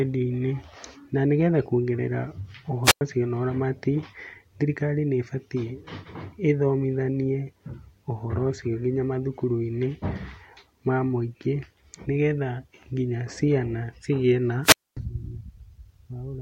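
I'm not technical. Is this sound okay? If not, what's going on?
No. Twice, at 2.84 to 3.01 s and 14.63 to 14.97 s, the speech briefly hisses, then drops to near silence, about 0.1 s and then about a quarter second, before returning at "ũcio na ũramati" the first time. This is wireless microphone squelch dropout: the radio signal faded, so the receiver muted itself.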